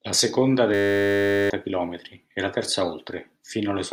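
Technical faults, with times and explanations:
0.74–1.5 s, system hang loop: The speech stops and becomes a steady buzz at 100 Hz. A single 10 ms slice of audio repeats exactly, about 76 times in a row. This happens when the computer or driver freezes while the sound hardware keeps replaying the same ring buffer. The buffer here is very short, so the repeats blur into a tone. Roughly 0.7 s of the speech is lost and replaced by this buzz.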